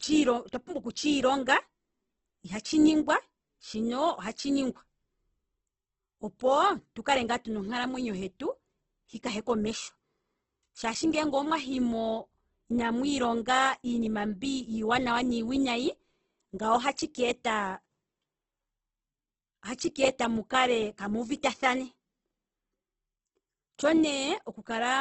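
Throughout the clip, the speech carries heavy codec damage, likely from Opus compression. Nothing reaches above about 8.3 kHz, so the top of the spectrum is gone and sibilants lose their edge. The encoder keeps each band's energy but runs short of bits. It fills the gaps with folded or noise-like content instead of leaving holes. Voiced sounds turn rough and grainy rather than swirly. This level of damage fits a bitrate around 12 kbps.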